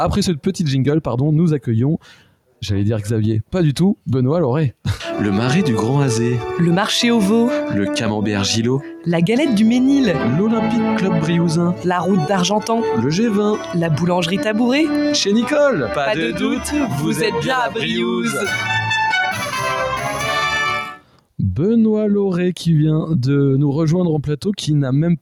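A speech-style noise suppressor has been left running over the whole thing, so steady parts and tails keep getting pulled down and let back up, swinging by around 5 dB and giving it a pumping, thinned feel. On top of that, there's sound cut by the noise suppressor from 1.98 to 2.62 s and again from 20.93 to 21.39 s, where it dips by about 12 dB because the processor mistook it for noise.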